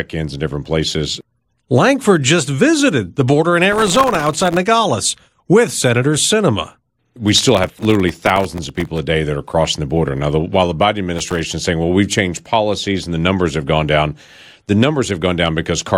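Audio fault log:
3.72–4.57 s, 7.28–8.98 s and 11.14–11.39 s: processor overload crackle. The processor keeps missing its deadlines for very short buffers, well under a millisecond each, and every miss drops a sliver of silence with hard edges. Many misses in a row make gritty tearing over the speech.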